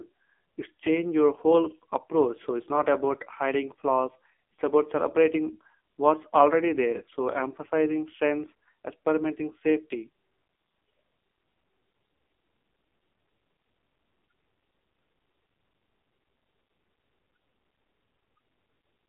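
A speech clip carried through the AMR narrowband mobile codec from start to finish. Its 8 kHz sampling leaves no content above 3.7 kHz, and the line band of roughly 250 Hz to 3.5 kHz strips the low end as well. The damage is heavy: the vocal-tract model, driven by sparse pulses, renders the voice buzzy and synthetic, which fits one of the lowest AMR-NB modes, around 5.9 kbps.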